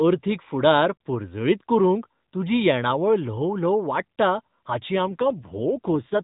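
From 4.96 s the speech grows rougher and more synthetic with no gap, an AMR rate drop that fits a fall from 12.2 to 5.9 kbps.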